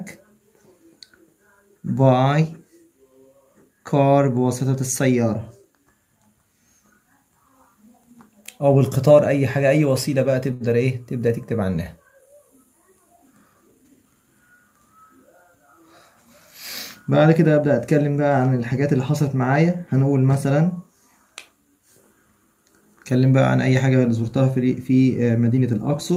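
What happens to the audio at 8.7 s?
Nothing goes wrong at 8.7 s; the audio plays through that moment intact, with no dropout, click or glitch to be heard.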